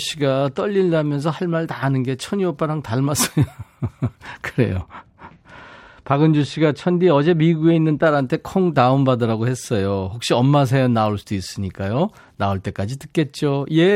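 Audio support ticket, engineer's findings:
De-emphasis applied wrongly, 4.82–8.06 s. Treble-cut stage engaged on speech with no pre-emphasis, or cut applied twice. Smooth downward slope above 1 kHz, about 13 dB down at 10 kHz. Result: speech dull, muffled, consonants softened for that span.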